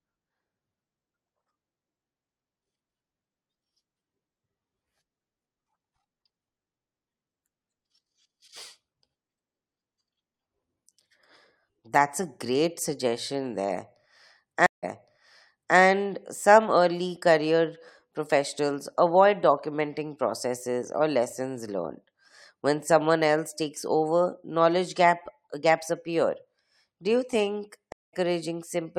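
Stream reconnects at 14.66 s and 27.92 s. The speech drops out for 163 ms, then replays from 0.95 s earlier. Later, a 204 ms gap skips roughly a fifth of a second ahead.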